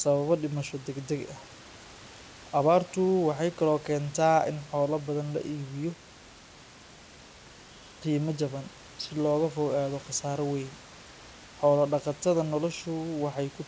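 No technical faults occur at any point in the speech; the G.722 call path leaves nothing above 8 kHz, and the room noise sits about 25 dB below the voice.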